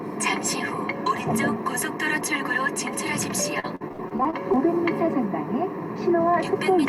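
A short sound clip with repeated packet loss (robotic sound) from 3.59 to 4.58 s. About ten dropouts, up to 68 ms each, were patched by repeating prior audio, making it choppy. A spectrogram shows smeared, repeated slices there.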